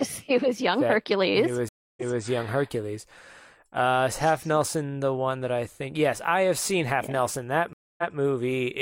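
Speech, with two stream reconnect faults. At 1.69 s the sound drops into about 286 ms of silence, then resumes 256 ms earlier, repeating that stretch. At 7.73 s it happens again: about 249 ms of silence, then a 171 ms repeat. The connection broke and the player reconnected. The server resent a burst of recent audio, so playback restarts behind where it stopped. A fresh decoder starts mid-stream, so the first frame fades in.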